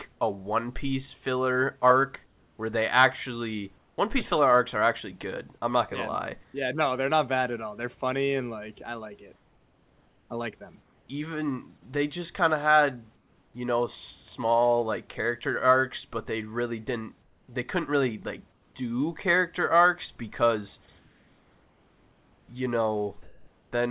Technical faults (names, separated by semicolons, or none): comfort noise in place of the background